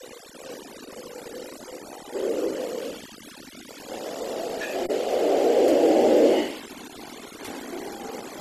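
From start to finish the speech carries overdone noise removal: a noise reduction stage set far too aggressively has pulled individual frequency bands down whenever they sat close to its noise estimate, taking quieter parts of the voice with them. Between phrases the background drops and breaks up into twinkling specks. Unlike a noise gate, which mutes everything at once, this cuts band by band, leaving those scattered tonal flecks.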